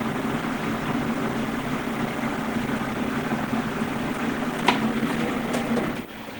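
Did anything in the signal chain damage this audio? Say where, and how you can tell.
Yes, at the codec stage. The whole clip is plainly marred by what is likely Opus compression, with a muffled, hoarse texture typical of its hybrid speech mode. Content still extends to about 20.4 kHz, and the damage points to a low bitrate near 16 kbps.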